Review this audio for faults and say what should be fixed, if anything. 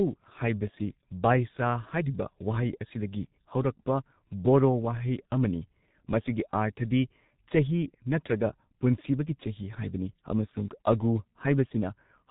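The whole recording carries heavy G.723.1 codec damage. Nothing above 3.8 kHz survives, so the speech is muffled and hoarse, and the coarse 30 ms frames with a slowly updated voice model smear consonants. The thinness fits roughly 6 kbit/s coding. To prevent it, capture or transmit with a wideband codec at a higher bitrate instead of legacy low-rate telephony coding.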